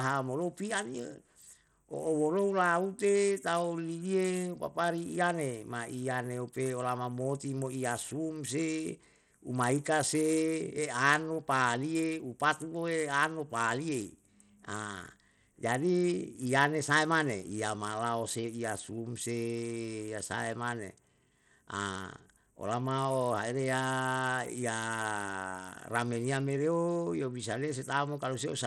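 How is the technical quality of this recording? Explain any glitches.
The quality is poor throughout, most likely from Bluetooth SBC compression. The link appears starved of bits, fitting roughly 80 kbps, so the coarse sub-band coder quantises the speech harshly. Nothing survives above 15 kHz, and the remaining treble sounds gritty, flickery and noticeably aliased.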